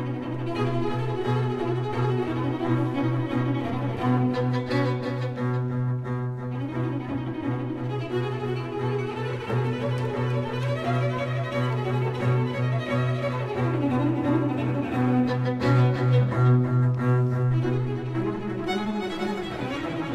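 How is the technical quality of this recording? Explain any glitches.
The recording has one fault, a doubled audio track running throughout. The same audio was likely captured a second time by a slower path, or an edit left two copies out of step. A full-band copy trails the original by roughly 300 ms at about 10 dB lower, with no decay or room colour.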